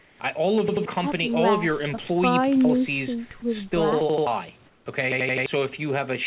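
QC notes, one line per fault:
0.0–0.2 s and 4.66–4.86 s, comfort noise in place of the background: for 200 ms each time, the real room background gives way to a flat, featureless hiss, about 6 dB and then about 4 dB quieter. This is likely discontinuous transmission, with the receiver synthesising noise during detected silence.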